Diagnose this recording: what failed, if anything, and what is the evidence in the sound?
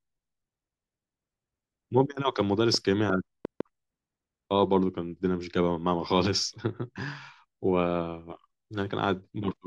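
From 2.74 to 3.61 s a short train of clicks ticks over the speech: around four sharp, similar pops at an uneven pace of about 3.5 per second, peaking roughly 10 dB above the speech. This is likely interference coupling into the analogue wiring or a faulty connection or power supply injecting pulses.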